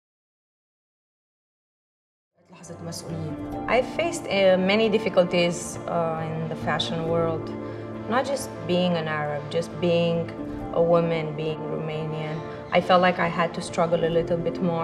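No technical fault can be heard in this audio. The level fades in smoothly from around 2.5 s until 3.35 s, with no click or hard edge.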